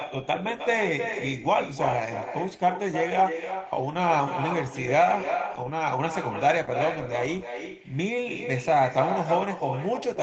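From start to finish, every phrase returns roughly a third of a second later, only about 7 dB quieter: an echo with no canceller, the far end's loudspeaker feeding its microphone back. Unlike room reverberation, the copy is a distinct, delayed repeat, not a smooth tail.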